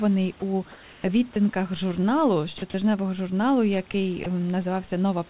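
At 0.40–0.42 s a bit of sound is lost to steady noise, likely sound dropped by the voice detector mistaking sound for background. The same 20–40 ms gaps recur at 1.34–1.36, 2.58–2.62, 2.70–2.74, 3.92–3.94 and 4.24–4.26 s. From 0.72 to 1.04 s the room background turns smoother and about 2 dB quieter, likely comfort noise in place of the background during a transmission pause. All of this sits on a telephone-band call path with nothing above 4 kHz.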